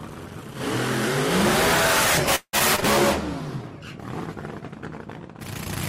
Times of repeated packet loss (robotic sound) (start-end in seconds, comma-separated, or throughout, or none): 2.35-2.83